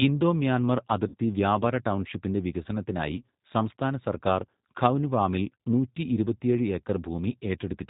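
Speech, coded throughout with the G.729 codec at 8 kbit/s. Content above 4 kHz is gone, and the sound is plainly rough and synthetic. VoIP packet loss concealed by the speech codec occurs twice. From 1.08 to 1.16 s, after "ഇന്തോ മ്യാൻമാർ", about 60 ms is extrapolated into a fading buzzy tone or coloured noise, fitting three lost packets. From 3.16 to 3.23 s, before "സംസ്ഥാന സർക്കാർ ഖൗനുവാമിൽ നൂറ്റി", a shorter 20 ms gap recurs.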